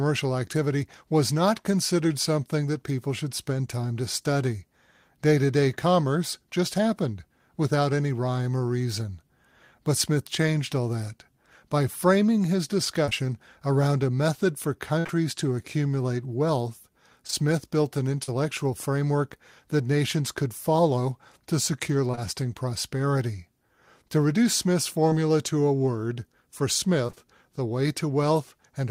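From 13.05 to 18.3 s there are scattered short gaps. About seven small pieces of the speech stream went missing or arrived late. The longest lasted about 50 ms. The receiver bridged each hole by extending the last sound, roughly 3% of the stretch in total. The result is clear speech broken by brief ticks, smears and hiccups.

Right after "could follow to secure", two short concealed packet losses run back to back, from 22.12 to 22.15 s and from 22.15 to 22.19 s. Each lost about 20 ms of audio. The decoder filled in by continuing the preceding pitch or noise, then blended back. It is heard as one quick smear or wobble, and a brief sound may drop out.

Scattered short gaps return from 25.09 to 27.26 s, just before "the way". About four small holes appear, the longest about 30 ms. Each was patched by extending the last sound. Again they come through as brief ticks and hitches.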